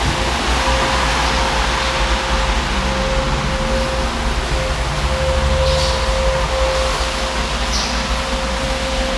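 No technical faults are audible.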